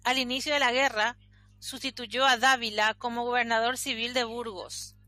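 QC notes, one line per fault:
No faults found on the speech track.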